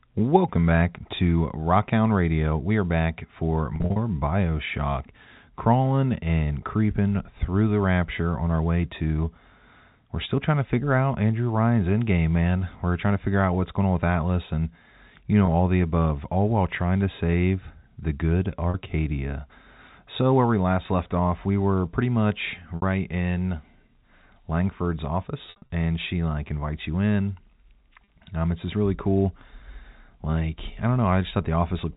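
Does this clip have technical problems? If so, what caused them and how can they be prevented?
Yes. The speech, carried over a G.711 telephone path limited to 4 kHz, has packet loss with pitch repetition at six points: 3.76–3.96 s (140 ms lost, scattered over 200 ms), 15.46–15.48 s (20 ms), 18.70–18.74 s (40 ms), 22.76–22.82 s (60 ms), 25.46–25.70 s (160 ms across 240 ms), and 28.04–28.08 s (40 ms). The lost durations come in multiples of 20 ms, which fits 20 ms packets. At each gap the receiver fills in by looping the last pitch period. The shorter gaps sound like a brief held, buzzy tone. The two scattered bursts, whose longest unbroken runs are 40 ms and 60 ms, are bridged the same way. Prevention: give voice packets network priority (QoS) and use a larger jitter buffer or forward error correction so that isolated and bursty losses are recovered before they reach the decoder.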